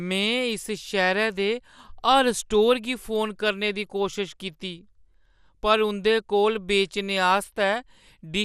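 From the first moment to the end, the speech sounds dull and gurgly, with a grainy, watery edge that's easy to hear. Nothing comes through above about 15.1 kHz, and the upper range seems to flicker in and out. That points to MP2 compression as the likely cause, at a rate that fits around 80 kbps. It's too few bits, so upper sub-bands get dropped and the rest are quantised coarsely.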